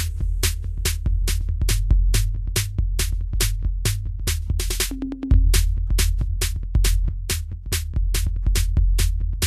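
From start to finish the music sounds hissy and grainy, with roughened tones, blurred attacks and nothing above 14.2 kHz. That is likely Vorbis compression at a low bitrate, near 31 kbps, where coarsely quantised treble detail turns into noise.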